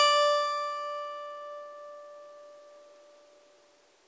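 The music comes through a call path with no faults, its content stopping at 8 kHz in the way a wideband G.722 call codec would limit it.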